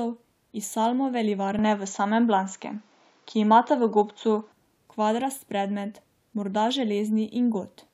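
At 1.59 s the speech abruptly turns duller and more closed-in, with nothing above about 7.4 kHz, a level shift of roughly 5 dB and a faint new background hiss sitting far below the voice. The change comes without any gap. At 4.52 s the full brightness returns just as suddenly. The likely cause is the input switched to a poorer device: recording moved briefly to a narrower-band microphone with its own tone, gain and noise floor, then back.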